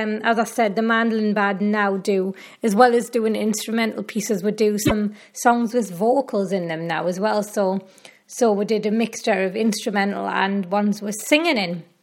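Damaged data in a compressed stream appears from 4.82 to 4.92 s: corrupted bytes in the encoded file leave the decoder misreading frames and losing sync while it hunts for the next valid frame header, producing a brief glitch lasting about a tenth of a second.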